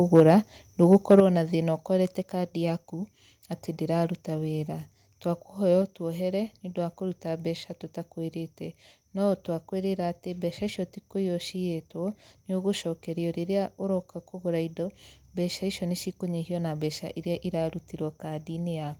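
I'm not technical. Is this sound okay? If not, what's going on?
No. The microphone was likely set too loud, causing microphone overload: from 0.15 to 0.31 s and 0.92 to 1.2 s the loudest speech sounds harsh and crackly. The call software likely then turned the microphone down, a microphone volume step down: at 0.2 s and again at 1.2 s everything suddenly gets quieter, the second drop more noticeably.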